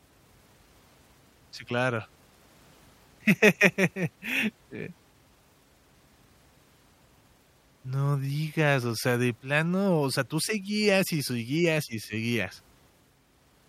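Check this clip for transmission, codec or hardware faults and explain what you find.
No faults turn up anywhere in this speech recording. There is nothing to flag at any point in the audio.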